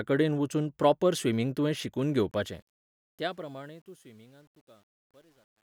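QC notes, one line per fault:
2.31–5.77 s, truncation distortion on a fade: Just after "प्रॉपर स्विमिंग तुवें शिकून", the speech fades out from about 2.3 s to the end. As the level drops, the tail turns gritty. The fade stage keeps too few bits and adds no dither, which fits a 10-bit stage. Quiet waveforms collapse into a few coarse square steps. From 3.32 s to 5.77 s it is worst.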